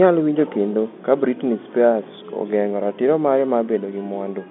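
No fault can be heard in this speech. The sound carries the narrow band of ordinary G.711 telephone coding, from about 150 Hz up to about 3.6 kHz, with at most a faint trace of its quantisation noise.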